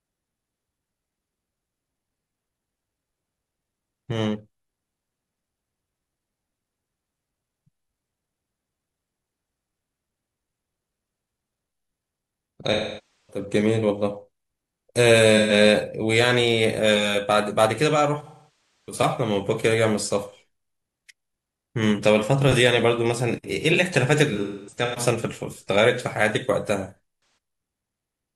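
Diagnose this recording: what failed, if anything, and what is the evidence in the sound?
Codec stage: AAC frame loss with concealment at 12.72–13.43, 15.37–15.52, 18.23–18.98, 24.33–24.99 and 26.94–26.98 s. The decoder repeats the last good spectrum, which shows as smeared, blurred spectrogram blocks.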